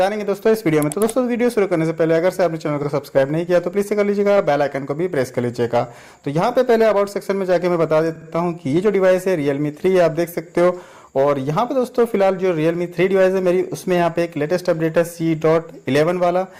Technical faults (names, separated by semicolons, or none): repeated frames